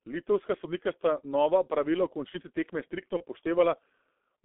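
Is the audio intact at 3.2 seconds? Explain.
No. VoIP packet loss concealed by the speech codec affects 3.17 to 3.24 s, just after "v končnici tekme striktno". The dropout is about one 30 ms frame long. The G.723.1 decoder filled it by extending its last pitch and filter settings at falling gain. That turns the sound into a brief buzzy tone or coloured noise that fades. Because each frame builds on the previous one, the sound stays weak or distorted until about 3.24 s.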